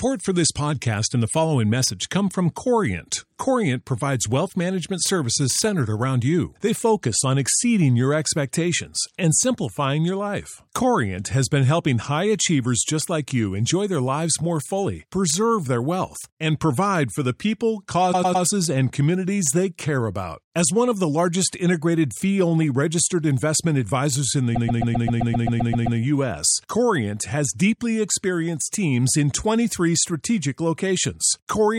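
A speech clip with repeated frames, where a run of compressed frames was sent or stored again and the decoder simply plays it back twice or more. You get a stutter from 18.12 to 18.43 s, just before "and communities they care", as a 104.5 ms block replays three extra times. A worse one comes right after "registered investment advisors in", from 24.54 to 25.98 s, where a 130.6 ms block loops eleven extra times and adds 1.44 s.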